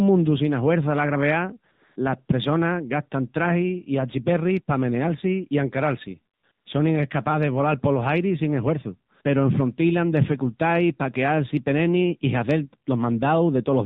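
AMR narrowband mobile codec, throughout: the speech runs through AMR-NB at 7.4 kbps, which squeezes everything into an 8 kHz-sampled band with nothing above 4 kHz, leaving the voice dull and boxed-in. At this low rate the vocal-tract model and its sparse pulse excitation cannot capture the voice faithfully, so the damage is plainly audible: a buzzy, synthetic edge on voiced sounds and a warbling smear over whatever background sits behind the talker.

AMR comfort noise, at 1.72 to 1.96 s, 6.34 to 6.44 s and 6.52 to 6.66 s: here the sending side decided the talker had gone quiet and stopped transmitting speech frames, for 240 ms, 100 ms and 140 ms respectively. The receiver filled each gap with generated noise built from a rough level and spectral description. The first gap falls between "sina huerça la graveá" and "las pressonas". The real background drops out, a smooth, even hiss switches in, then switches back out as speech resumes.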